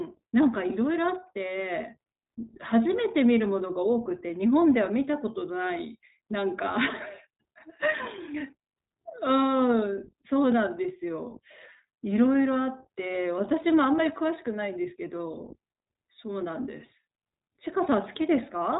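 From start to finish the speech sounds thin, boxed-in and faintly synthetic, with a rough, buzzy grain to it and no air or sibilant sparkle, since nothing above about 3.8 kHz survives. This is iLBC codec damage, and it is plainly audible. The narrowband coder rebuilds each short frame's excitation independently, which fits 20 ms frames at around 15.2 kbps, so the result stays intelligible but loses natural smoothness.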